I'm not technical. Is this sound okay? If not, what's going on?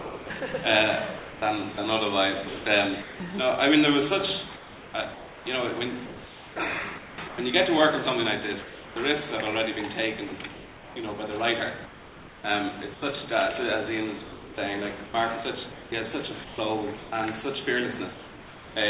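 No. Sound chopped by the voice detector at 0 to 3.2 s, 4.56 to 7.38 s, 10.28 to 10.96 s and 14.24 to 17.12 s: it flickers on and off, with bits likely swapped for fake hiss by the sender's detector.

Sound dropped by the voice detector at 8.62 to 8.96 s, 12.94 to 13.02 s and 18.14 to 18.76 s: the sound briefly vanishes into steady noise, likely because the sender mistook it for background and stopped sending.

Comfort noise in place of the background from 11.86 to 13.02 s: the real room sound is likely replaced by a flat, featureless hiss generated at the receiving end. The call line itself also caps everything at 4 kHz, so it all sounds a bit dull.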